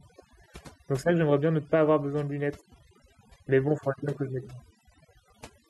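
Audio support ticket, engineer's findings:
Noise reduction stage set too aggressive, throughout. Bins near the noise estimate pulled down or gated per band, taking low-level speech detail with them. Background drops and breaks up into twinkling specks. Overdone noise removal.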